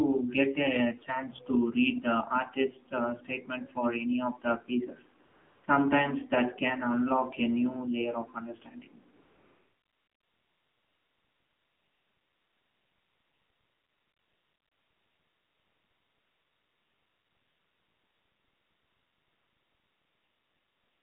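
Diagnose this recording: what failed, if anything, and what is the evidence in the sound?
The whole recording sounds thin, boxed-in and buzzy, with the speech confined to roughly 200 Hz to 3.5 kHz and a plainly synthetic, gritty edge on every syllable. The failure is at the codec stage: the AMR narrowband mobile codec samples at 8 kHz and rebuilds the speech from a vocal-tract model fed by a handful of pulses per subframe. The degree of buzz fits a low mode of around 7.4 kbps, where too few pulses are available to carry natural texture.

The background abruptly becomes a smooth, featureless hiss from 5.26 to 5.64 s, again briefly at 5.66 s, and then continuously from 9.16 s to the end. This is AMR comfort noise, introduced in call processing and the codec's discontinuous transmission. The sending side judged those stretches to be silence and stopped sending speech frames, so the receiver generated stand-in noise from a coarse level-and-spectrum description. 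That produces the switching in and out of steady noise in place of the real background.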